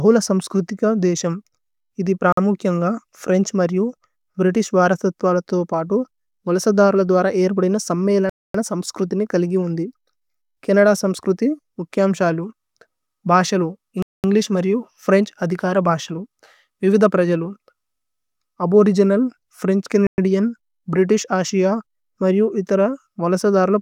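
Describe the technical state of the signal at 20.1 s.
At 20.1 s the speech drops to silence from 20.07 to 20.18 s, a gap of about 113 ms, then resumes. This is a Bluetooth stall, likely caused by interference delaying packets until the headphone buffer emptied and playback paused for retransmission.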